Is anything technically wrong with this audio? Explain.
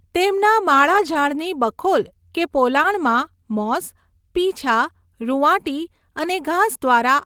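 Yes. Nine lost packets, in three stretches, were rebuilt from error correction, at 0.93 to 1.15 s, 2.77 to 2.83 s, and 6.23 s. Each missing packet was replaced by a low-bitrate copy carried in the following packet, so the speech never drops out. Those stretches sound briefly rougher and noisier. A waveform shows no gap, but a spectrogram shows smeared, grainier harmonics and a noisier texture across each patch.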